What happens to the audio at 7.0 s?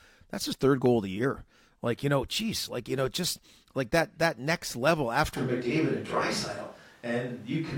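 A switch to a distant microphone is under way at 7.0 s; it begins at 5.38 s and runs to the end. The close microphone has likely dropped out, leaving a farther pickup. The speech turns abruptly roomy and hollow, thinner in bass, at much the same level, over room noise roughly 30 dB down.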